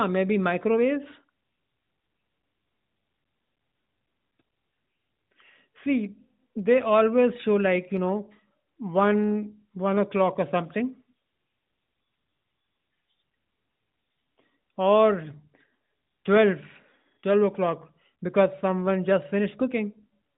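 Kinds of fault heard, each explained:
No faults heard.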